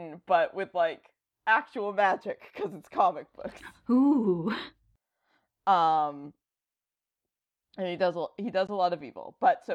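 Speech with one brief hole at 8.67 s, just after "and he does he": about 13 ms of sound vanishes, then resumes as though it had kept playing. That points to a likely Bluetooth dropout, fitting a single lost packet, not a stall, which would delay rather than skip.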